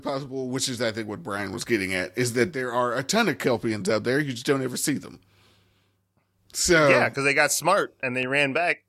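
A short piece of speech with one loud pop right near the end, from 8.23 to 8.25 s. It's a single sharp click lasting about 20 ms, peaking a few decibels above the speech, and the talking carries straight on underneath it rather than dropping out. That's the signature of a voltage spike landing on the signal, likely a connector being bumped, a switch being thrown or a bit of static discharge somewhere in the chain, with the downstream electronics turning it into that brief thump.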